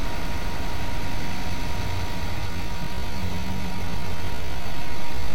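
From the start, every event is followed by a full-band duplicate roughly as loud, trailing by about 200 ms, with no decay or room colour. This doubled audio track is likely the same signal mixed in twice, a second copy arriving late through a slower capture path or an edit holding two copies out of step.

At 2.34 s the pace abruptly drops to about 0.67 times normal speed and stays there to the end, while pitch is unchanged; the sound drags. This time-stretched section likely comes from software lengthening the audio to fill a slot, repeating short pieces to preserve pitch.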